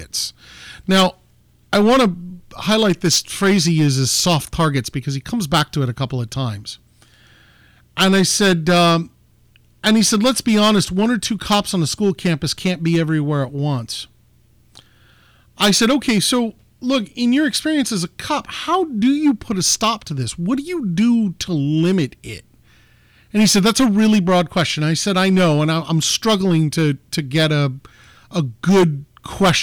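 Hard clipping runs through the whole speech recording. The signal is driven about 13 dB beyond what the chain can pass, so a few percent of samples are sliced flat. Unlike soft saturation's rounded warmth, these squared-off peaks add harsh, gritty high-frequency fuzz on every loud moment.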